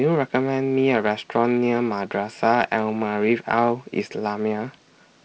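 No technical faults occur anywhere in this speech, which carries the faint upper-band hiss and slightly noisier low band of G.722 wideband telephone coding at 48 kbit/s.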